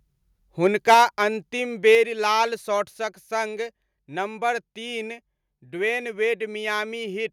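From 0.65 to 1.03 s and again from 1.87 to 1.95 s the loudest syllables turn harsh and crackly, with flat-topped waveform peaks and broadband smear on the spectrogram. This is likely microphone overload, about 6 dB and then about 2 dB past the converter's limit, with a few percent of samples clipped. The level then drops abruptly by about 4 dB at 0.94 s and 1.95 s, and by about 2 dB at 2.97 s just before "सङ्ग नम्बर". Each drop appears as a clean step in the waveform envelope, consistent with the microphone volume being stepped down.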